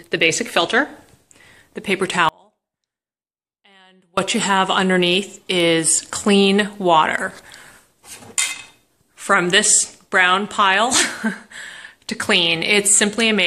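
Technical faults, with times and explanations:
2.29–4.17 s, audio dropout to a faint residue: the signal cuts out abruptly for about 1.9 s, and the gap is not silent but holds a faint trace of the sound roughly 35 dB below its normal level before it returns just as suddenly. The likely cause is a brief loss of the wanted feed while the path after the break stayed live, letting a weak leak through. The hard edges make it sound unlike a pause or a fade.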